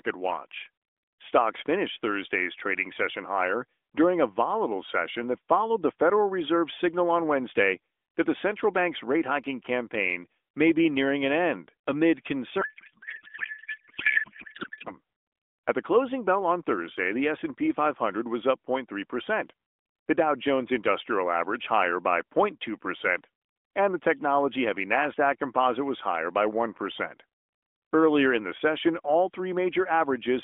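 A codec payload misread runs from 12.62 to 14.90 s, right after "nearing an end amid". The AMR frames were packed in octet-aligned form but unpacked as bandwidth-efficient, so every field lands shifted and the decoder rebuilds nonsense from valid-looking frames. For those two-odd seconds the speech gives way to garbled noise and warble that barely tracks it, still confined to the narrow phone band that suggests AMR-NB at around 12.2 kbps.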